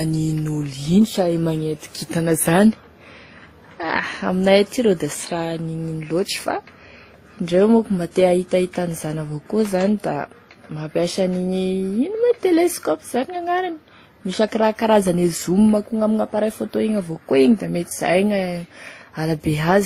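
Speech, carrying layered coding damage from start to finish. Nothing is present above 15.6 kHz, and the artefacts of one codec are heard together with those of another, with a third codec's artefacts on top of both. This is likely transcoding between lossy codecs: a low-rate HE-AAC-like encode, then something resembling WMA, and finally Opus, each spending bits re-encoding the previous stage's errors while adding its own.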